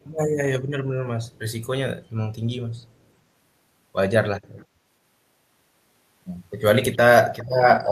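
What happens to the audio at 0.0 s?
Right at the start, from 0.02 to 0.06 s, there's a brief echo leak: a very faint, delayed copy of the speech arriving about 394 ms late, likely from a far-end speakerphone whose echo canceller let a scrap of its own pickup slip back down the line.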